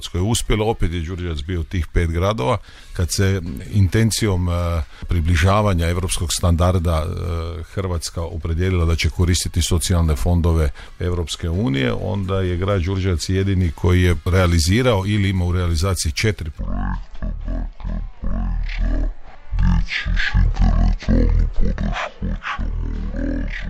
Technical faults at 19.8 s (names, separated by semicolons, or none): stereo read as mono